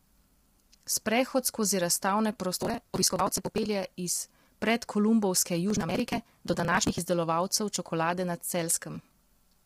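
Throughout, the speech sounds rough and grainy, with a noisy haze filling the spaces between the voice's harmonics and nothing at all above 15.6 kHz. The damage is heavy and most likely comes from low-delay AAC compression (AAC-ELD) at a low bitrate such as 24 kbps. Its short frames cannot resolve pitch harmonics finely, so at that bitrate the coder smears noise between them and gives up the top of the spectrum.

From 2.54 to 3.65 s, between "skozi razstavne" and "iz predkolumbovske", a gritty, tearing crackle rides on the speech. A second burst runs from 5.70 to 6.98 s, just after "iz predkolumbovske", and a brief third one comes at 8.95 to 9.11 s. This is processor overload crackle. The timing fits an audio processor that could not finish its small buffers, each about 10 ms, before their deadlines. Around a hundred buffers were missed in each of the first two bursts and about ten in the last. 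Each missed buffer was skipped rather than filled, leaving a short hard-edged gap. Packed together, those gaps fuse into crackle, which stops once the load eases.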